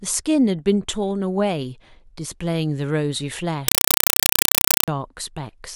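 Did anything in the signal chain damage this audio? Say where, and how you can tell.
Yes. From 3.68 s to 4.88 s the speech is replaced by loud, chattering static. This is a compressed stream played as audio, a fault at the playback stage on the digital output link. The static arrives as short bursts of about 4 ms, repeating 31.25 times a second, with silence between them. The receiver has treated a Dolby Digital (AC-3) stream as ordinary samples. It plays each coded frame as noise, followed by its zero padding. The pattern fits a 192 kbps stream.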